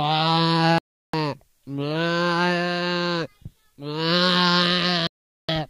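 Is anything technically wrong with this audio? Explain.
Yes. There are two digital broadcast dropouts, at 0.78 to 1.14 s and 5.07 to 5.49 s. The receiver stopped getting usable frames and muted, so the sound cuts to silence for about 0.36 s and 0.42 s, and that audio is lost.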